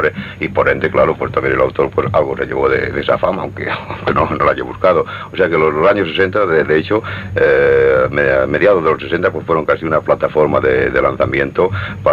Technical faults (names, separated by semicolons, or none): none